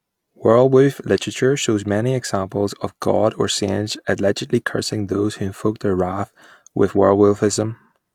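Speech with no audible faults.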